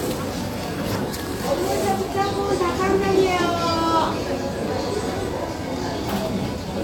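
No technical faults are audible in this recording.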